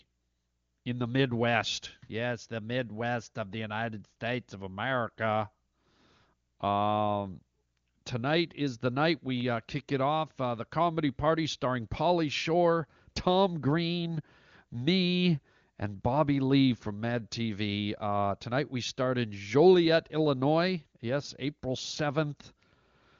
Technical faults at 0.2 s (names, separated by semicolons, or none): none